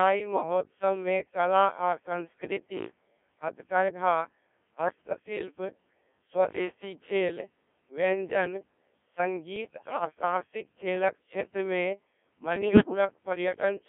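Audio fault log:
throughout Codec 2 vocoder: the speech is rebuilt from sine waves carrying only pitch, voicing, level and a coarse spectral envelope, so it sounds buzzy and robotic within a 200 Hz to 3.4 kHz band. The heavy smearing fits a 1.3 kbit/s mode. Unlike ordinary low-bitrate hiss or warble, the waveform itself is gone.
9.56–10.05 s and 12.56–12.85 s bit errors on digital voice radio: corrupted bits, around one in twenty and then a little more, scramble whole frames. Pitch, level and tone colour jump into bleeps and gibberish just before "साहसिक खेलक क्षेत्रमे". Unlike the steady vocoder buzz, these are sudden bursts.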